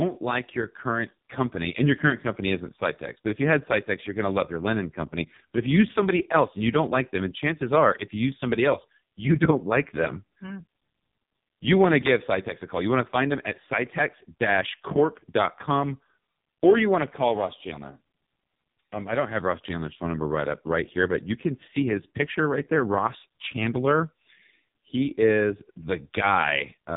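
Throughout the speech, the sound is heavily buzzy and synthetic, with nothing above 3.8 kHz. This is AMR narrowband mobile codec damage: AMR-NB rebuilds the voice from a vocal-tract model fed by sparse pulses, and at 4.75 kbps too few bits remain to keep it natural.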